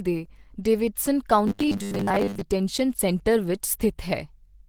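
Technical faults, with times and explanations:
throughout, Opus compression: the speech has a rough, grainy, hoarse texture, likely from Opus at around 16 kbps in its hybrid mode, where the encoder splits the job between a speech coder down low and noise-filled bands up top, so detail turns smeary rather than swirly.
1.47 to 2.41 s, robotic sound from repeated short buffers: right after "ਦੇ ਡੇਵਿਡਸਨ" and up to "ਸੈਂਟਰ ਵਿੱਚ" the speech locks into a rigid metallic buzz at 100 Hz, likely because tiny 10 ms chunks were replayed for most of that stretch while fresh audio got skipped.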